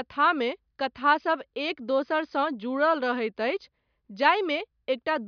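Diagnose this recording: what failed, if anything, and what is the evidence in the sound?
Nothing failed: no stage in the chain, from wiring through to playback, leaves any audible evidence in this speech recording.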